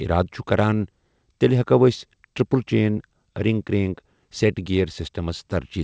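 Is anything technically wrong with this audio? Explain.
No, nothing is technically wrong.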